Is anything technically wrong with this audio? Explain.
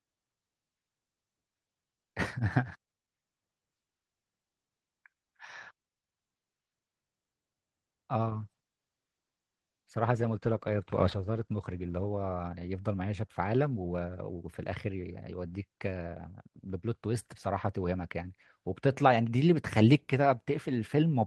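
Yes. From 8.22 s to 12.49 s there is a call bitrate drop. The call's bandwidth estimate fell, and the Opus encoder was told to spend far fewer bits. The sound suggests a fall from 32 kbps to around 14 kbps, held at the low rate for about 4.2 s. Coarser coding makes the speech rough and watery, and it loses top end. Unlike packet loss, there are no gaps or repeated fragments, and quality returns once the rate recovers.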